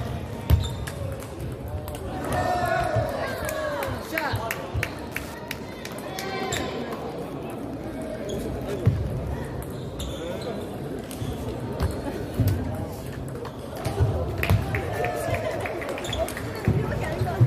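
From 2.95 to 9.31 s, Wi-Fi interference adds faint ticking every 102.4 ms, far below the signal, as circuitry rectifies a nearby radio's beacon. A spectrogram shows evenly spaced thin vertical lines.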